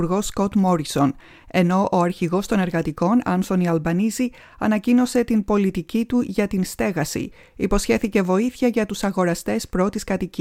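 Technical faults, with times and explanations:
Nothing technical stands out here; the audio runs along without any glitches worth flagging.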